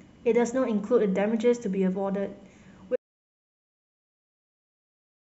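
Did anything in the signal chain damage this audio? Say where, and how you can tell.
Yes: audio dropout to silence, likely a lost input link. From 2.96 s to the end the waveform is flat silence, spectrogram blank, no room tone.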